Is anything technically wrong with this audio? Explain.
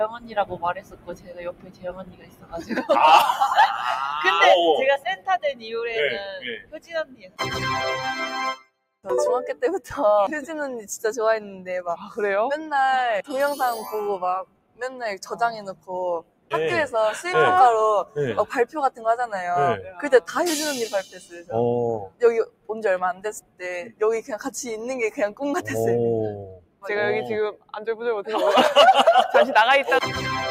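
Yes. Across the whole clip the level pumps and thins, with held and fading sound sinking while sharp onsets push through, a swing of about 15 dB. A noise suppressor built for speech was left on, mistaking steady tones, ambience and decays for noise.

Sound cut by the noise suppressor is clearest at 0.08–2.9, 4.98–7.4, 8.56–9.88, 11.56–12.18, 14.44–16.53, 18.05–20.05, 21.03–24.34 and 26.37–27.76 s. Sustained parts dip by about 19–20 dB, and by about 9 dB at 11.56 s, as the suppressor clamps down on them.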